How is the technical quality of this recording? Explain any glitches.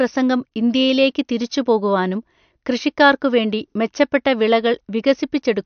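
Technical quality is limited by MP3 compression damage that is plainly audible across the whole recording. Throughout the speech, nothing is present above 6.5 kHz, so sibilants lose their crispness, and the remaining detail has a watery, swirling texture. The likely cause is a low-bitrate MP3 encode, consistent with roughly 58 kbps. Short of bits, the encoder cut the treble at a fixed frequency and dropped weak spectral lines, which then flicker in and out from frame to frame.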